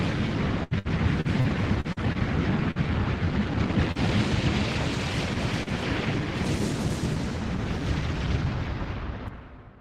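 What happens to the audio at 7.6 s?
Nothing goes wrong at 7.6 s: the audio plays through that moment intact, with no dropout, click, distortion or other fault.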